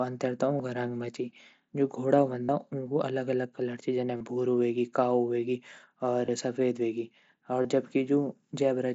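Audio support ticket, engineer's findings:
Concealed Bluetooth headset packet loss, five events. 0.58 s: 15 ms. 2.44–2.49 s: 45 ms buzzy held tone, small warble as real audio returns. 4.17–4.21 s: 37.5 ms, same buzz. 6.26–6.28 s and 7.62–7.65 s: 22.5 ms each, brief buzz. Cause: voice packets dropped between headset and phone. Receiver fills each gap with the best-matching slice of recent waveform at full level. Longest gap fits about six lost frames. mSBC wideband link audible underneath, 8 kHz ceiling.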